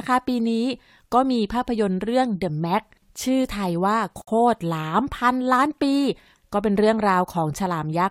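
At 4.22 s the speech stops for 58 ms, a gap at a join of encoded pieces: separately encoded segments were spliced with their encoder delay and end padding left in. Unlike a dropout, nothing is lost. The sound resumes exactly where it stopped, with softly smeared edges.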